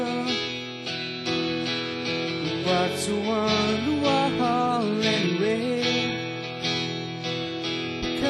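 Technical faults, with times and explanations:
No technical faults detected.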